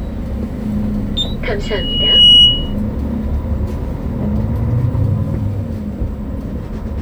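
A microphone picked up the loudspeaker it was feeding, and the loop gain passed one near 2.9 kHz, causing loudspeaker feedback squeal from 1.63 to 2.74 s. A single piercing tone swells for most of a second, then sits roughly 15 dB above the underlying sound before cutting off.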